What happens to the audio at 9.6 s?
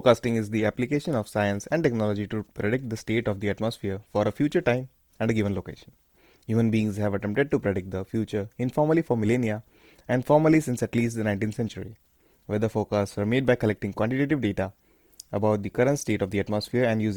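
At 9.6 s the speech sounds grainy and rough, as it does throughout, likely from Opus compression, whose noise-filled bands fit a low-bitrate, roughly 24 kbps, fullband CELT encode.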